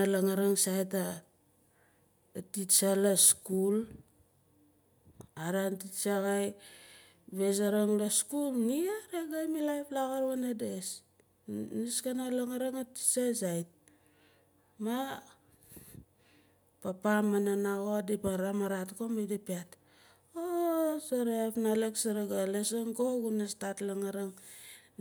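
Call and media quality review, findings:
Nothing stood out on listening to the speech recording, so there are no findings to log for this ticket.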